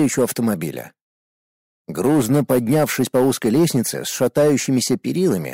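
Hard clipping runs throughout. The signal is driven about 6 dB past the limit, so about 4 percent of samples are cut flat. They crackle with added high harmonics.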